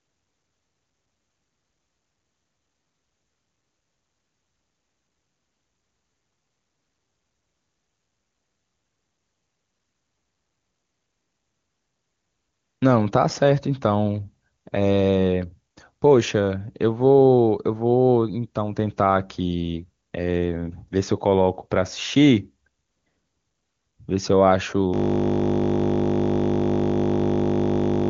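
From 24.94 s to the end, the speech gives way to a steady 50 Hz buzz. This is a system hang loop: the system froze while the sound hardware kept replaying the same 20 ms buffer, which fits a short ring buffer. The band-limited sound stopping near 7.2 kHz is consistent with AMR wideband (HD Voice) coding.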